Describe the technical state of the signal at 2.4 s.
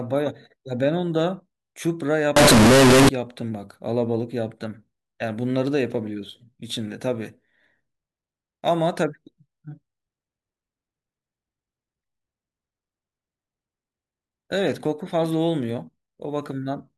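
At 2.4 s you're inside a float read as integer stretch, running from 2.36 to 3.09 s. It sounds likely to be 32-bit float samples read as 32-bit integers, so the sign and exponent bits set the level. That gives a loud, harsh, near-square buzz at an almost fixed, high level, with the background noise pushed up as loud as the speech.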